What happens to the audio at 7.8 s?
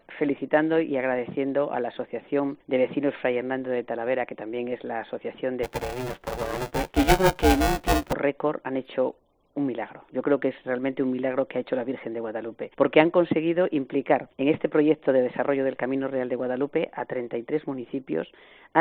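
At 7.8 s the audio is inside a stretch of buffer tearing that runs from 5.63 to 8.13 s. The software filling the playback ring buffer and the hardware draining it have drifted out of step, so they cross within every period. About half of each buffer still holds audio from the previous lap, some 10 ms old, spliced in with hard edges. The result is a steady robotic buzz at 375 Hz, which fits a 128-sample buffer, riding on the sound wherever signal is present.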